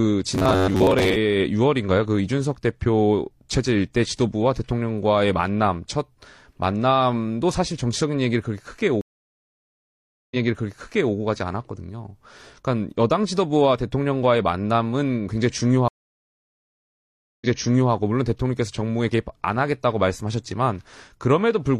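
From 0.35 to 1.17 s the speech turns into a rigid, metallic buzz pinned at about 94 Hz. This is robotic sound from repeated short buffers, likely caused by audio arriving too seldom so that the player keeps replaying a slice of roughly 11 ms while most of the real signal is skipped. On a spectrogram the harmonics collapse into an evenly spaced comb at 94 Hz intervals. The waveform shows the same short cycle repeating.

At 9.01 s a stream reconnect cuts the sound to silence for about 1.3 s. Playback resumes 0.84 s earlier than where it dropped, so a stretch is heard twice, and it settles by 11.15 s. A second reconnect at 15.88 s leaves about 1.5 s of silence, then jumps back 0.51 s and finishes by 17.92 s. A spectrogram shows each gap as a blank band, with energy fading back in over the first frames after it.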